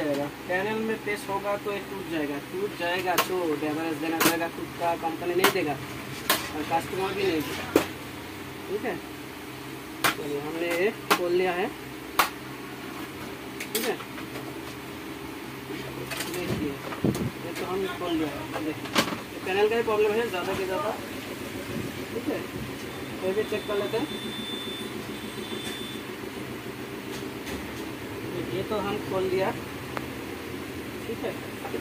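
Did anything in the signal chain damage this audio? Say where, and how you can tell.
No, nothing audible points to damage at any stage of the signal chain, and the signal holds steady throughout with no sign of disruption.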